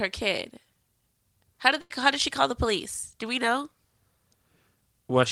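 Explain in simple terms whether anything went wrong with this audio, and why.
At 1.81 to 1.91 seconds the speech briefly turns into a held, fading sound and then skips ahead. That's a burst of packet loss: about 90 ms of audio never arrived, so the last sound was stretched over the gap.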